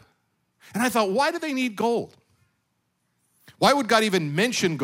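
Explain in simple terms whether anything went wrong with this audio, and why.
Nothing went wrong here.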